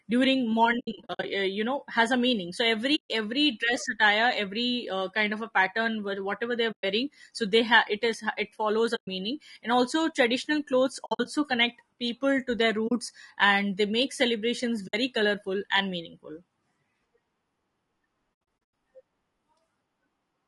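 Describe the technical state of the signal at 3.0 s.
AAC frame loss with muting runs from 2.95 to 3.09 s, about 140 ms. The decoder zeroes the spectrum for the missing frames, and the overlapping windows fade the sound out and back in, leaving a soft-edged silent hole.

Under this, the speech has the rough, grainy texture of low-delay AAC compression, likely AAC-ELD at a low rate around 32 kbps. At that rate too few bits are left to code the voice cleanly, so noise fills the gaps between its harmonics and the top band sounds thin and synthetic.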